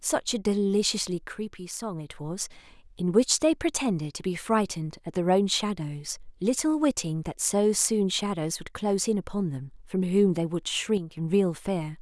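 From 1.33 to 2.10 s, and again from 10.97 to 11.17 s, the speech suddenly drops by about 6 dB, then snaps back to full level. This is likely one channel dropping out: with one side of the stereo pair gone, the mono sum keeps only half of what both sides shared. Unlike a full dropout, the sound never goes silent, and unlike a gain ride, the drop is instant, with no fade.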